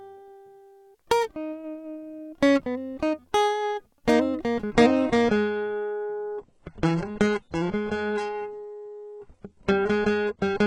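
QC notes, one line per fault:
4.73 to 10.66 s, adaptive stream at a lower bitrate: the music drops to a much thinner version at 4.73 s with no gap and stays there to the end. The connection slowed and the player switched to a lower rung, which sounds like roughly a 96 kbit/s AAC stream swapped for a very lean HE-AAC one around 12 kbit/s. Nothing is left above 11.1 kHz, with more codec smearing from there on.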